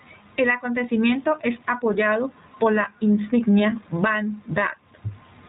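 Speech running through the iLBC codec for its whole length: band-limited at 4 kHz, with audible roughness and a synthetic edge, consistent with 20 ms frames at 15.2 kbps.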